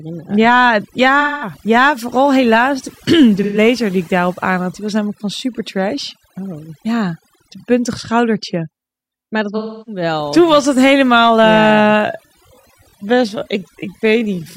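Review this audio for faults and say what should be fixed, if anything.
Overdone noise removal runs through the whole clip: bands near the noise floor are pulled down hard, so the background drops to near silence with twinkling specks. A spectrogram shows a black floor dotted with isolated bright flecks. Set the reduction gentler, with a higher floor, before export.

AAC frame loss with concealment occurs at 1.20–1.53 s, 3.42–3.58 s and 9.57–10.02 s, gaps of about 210, 130 and 300 ms. The decoder patches each gap from the last good spectrum, so each one is filled in rather than left silent. A spectrogram shows blurred, horizontally streaked blocks, and the waveform loses its shape there. Send the stream over a path with error protection or retransmission.

A time-stretched section runs from 11.57 s to the end, slowed to about 0.69 times speed with the pitch held. It is likely a stretch that repeats short pieces, so the speech drags. 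The waveform shows syllables abruptly spaced wider, with repeated grain patterns. Fit the timing by editing rather than by stretching.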